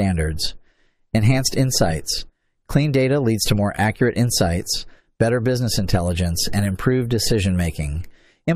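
No technical faults can be heard anywhere in this recording of speech, and the signal stays steady throughout.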